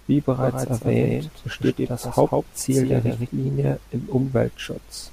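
Speech, with a doubled audio track from 0.41 to 3.27 s: a dry copy trails about 150 ms behind, a few dB quieter, likely from a slower second capture path.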